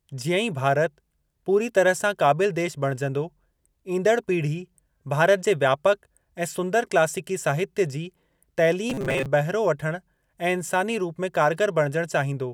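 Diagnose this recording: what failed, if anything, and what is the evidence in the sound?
From 8.90 to 9.27 s the speech turns into a rigid metallic buzz at 134 Hz, ending just before "बहिरो वठण ऐं इंसानी". This is robotic sound from repeated short buffers, likely a starved driver buffer looping about 7.5 ms segments, replacing roughly half the audio.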